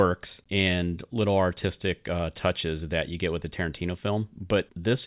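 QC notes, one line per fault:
No faults found.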